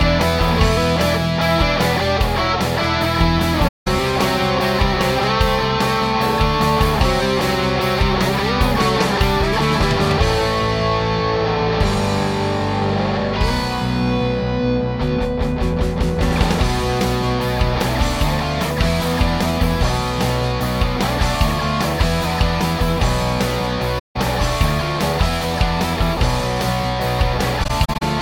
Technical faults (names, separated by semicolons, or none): AAC frame loss with muting